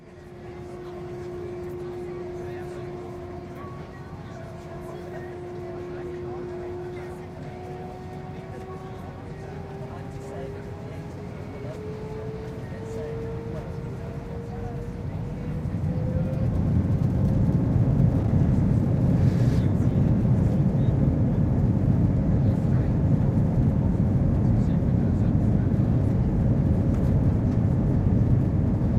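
Everyday sounds, no audible faults.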